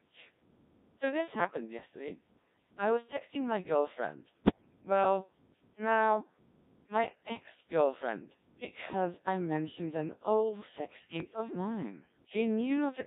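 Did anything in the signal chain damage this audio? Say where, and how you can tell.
Yes. The codec stage damaged the whole clip. The speech sounds robotic and buzzy from start to finish. That points to the Codec 2 vocoder, at a rate that fits 1.3 kbit/s. The codec damage is heavy. Codec 2 does not keep the waveform. It sends only pitch, voicing, energy and a spectral envelope. The decoder then rebuilds the voice from sine waves. Anything that is not a single voice gets mangled.

The radio link adds bit errors on digital voice radio in two bursts. The first runs from 1.44 to 1.60 s. The second runs from 4.44 to 4.81 s, just after "was texting my girlfriend". In these spans the synthetic voice jumps in pitch, level and tone colour. The first burst sounds like about three frames were hit, at around one bit in ten. The second sounds like about eight frames, at around one bit in twenty. At such a low rate, each flipped bit corrupts a whole frame's parameters.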